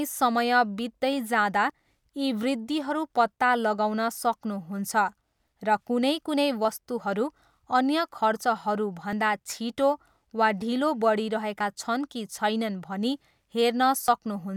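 At 1.70, 4.17, 6.65, 9.13, 11.61 and 14.08 s the speech skips forward by a brief sliver, around 20 ms, with the two sides butted together and no silence between them. This is audio missing between chunks, likely from a recorder handing over between blocks about 2.5 s long. The perfectly regular spacing, with nothing left blank, sets it apart from random network dropouts or muted gaps.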